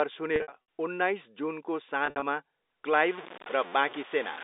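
At 0.36 to 0.52 s and again at 2.06 to 2.22 s, packet loss with pitch repetition breaks up the speech. Gaps totalling 180 ms and 100 ms, each with runs up to 60 ms, were bridged by looping the last pitch period, giving a held, buzzy tone before the speech resumes.

From 2.93 s to the end, the speech turns grainy and harsh, with a distortion that tracks the signal and sits roughly 15 dB below it. The likely cause is low bit depth without dither, with truncation to something like 5 bits, all within the narrow band of the G.711 telephone coding.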